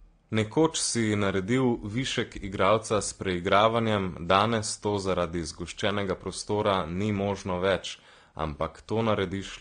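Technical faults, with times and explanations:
Throughout, transcoding between lossy codecs: nothing reaches above 9.7 kHz, and the speech carries two overlaid layers of coding damage, a smeared, watery low-bitrate texture with a second codec's grainy swirl on top. The likely cause is a chain in which a low-rate AAC encoding, around 32 kbit/s, was re-encoded to WMA 1 at a higher rate. The second encoder spent its bits faithfully reproducing the first one's artefacts and added its own, while the first stage's low cut-off survived.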